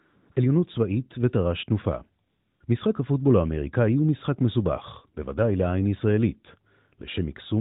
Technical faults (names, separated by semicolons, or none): AMR comfort noise